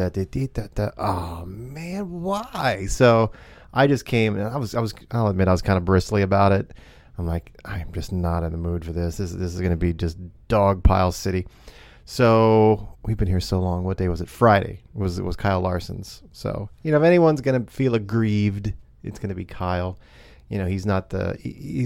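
No technical faults can be heard in this recording.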